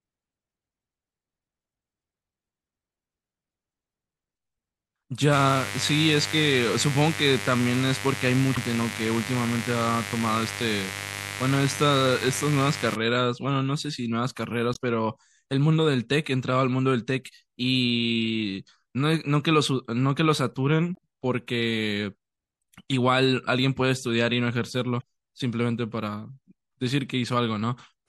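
Throughout the speech there is a watery, swirling quality, with s sounds turning metallic and consonant attacks smearing. This is likely MP3 compression at a low bitrate, consistent with roughly 64 kbps. On a spectrogram, the treble stops at a hard ceiling and the upper bands break into flickering, patchy blocks.

From 5.33 to 12.95 s a steady, raspy mains buzz sits roughly 10 dB below the speech. Sharp switching spikes leak in twice per 50 Hz cycle. On the spectrogram this appears as evenly stacked horizontal lines at 50 Hz multiples, reaching several kHz, and the waveform shows a spiky 100 Hz ripple.

Damaged data in a compressed stream causes brief chirps or squawks at 8.53 to 8.58 s, 14.72 to 14.77 s, 20.94 to 20.98 s and 24.99 to 25.03 s. Each time, the decoder misreads corrupted frames and resynchronises. The spectrogram shows a short vertical smear of broadband energy, and the waveform shows a discontinuity.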